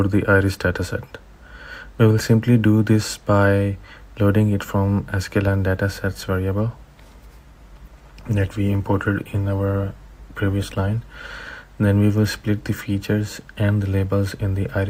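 From 7.38 to 11.38 s the adaptive stream drops to a lower bitrate: quality suddenly worsens and codec artefacts rise, which fits Opus falling from 64 to 16 kbit/s.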